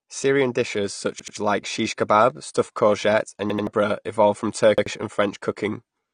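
Speech, dull and band-limited throughout, with nothing above about 9.7 kHz and plainly audible smearing and swirl on sibilants. This is likely AAC compression at a low bitrate, around 32 kbps AAC-LC, where the encoder lowers its cut-off and coarsely quantises what remains. Three repeated buffer stutters interrupt it. From 1.20 to 1.37 s, just before "like shish kebab stuffed", an 85 ms chunk plays twice more with hard joins. The same happens from 3.50 to 3.67 s, between "kebab stuffed courgette and" and "evolved from". From 4.78 to 4.86 s, after "evolved from", the chunk repeats once. Each repeat length fits a 4096-sample buffer being replayed when fresh audio arrived late, and the repeats displace around 150 ms, 150 ms and 100 ms of audio respectively.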